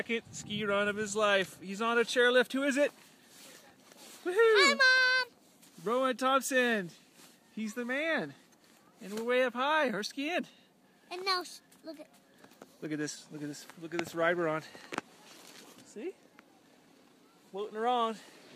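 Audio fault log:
4.97 s, electrical switching spike: a single sharp snap lasting only a few milliseconds sits on top of the sound at a modest level, around -30 dBFS, with nothing before or after it. The likely cause is a nearby switch, motor or static discharge arcing and coupling into the audio line. Unlike a dropout or digital glitch, the underlying sound carries on unbroken beneath it; the snap is added, not something missing.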